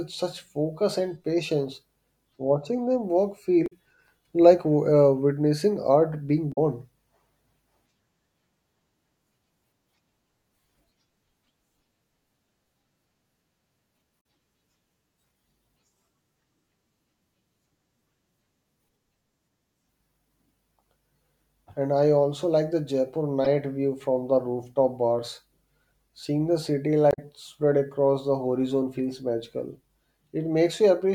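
Damaged data in a compressed stream causes brief glitches at 3.64–3.72 s, 6.49–6.58 s after "uh witnessing art being", 14.17–14.20 s, 23.45–23.47 s before "view from the rooftop", and 27.09–27.19 s between "the city" and "spread across the horizon". Corrupted frames make the decoder lose sync.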